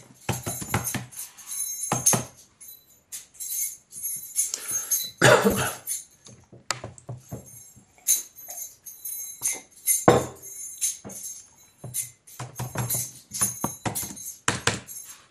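From start to finish the sound is dull and gurgling, with plainly audible codec damage. This points to MP2 compression, likely at around 80 kbps. Too few bits switch upper sub-bands off, and they flicker. The remaining bands are coarsely quantised and turn granular.

From 5.50 to 5.57 s, a short burst of DAB burbling breaks into the sound. Uncorrected bit errors reached the MP2 data and corrupted samples. Wrong samples put short blips of noise into single sub-bands. This fits a handful of damaged frames.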